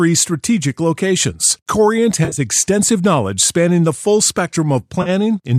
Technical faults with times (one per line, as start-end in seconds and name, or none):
2.25-2.40 AAC frame loss with concealment
5.02-5.09 AAC frame loss with concealment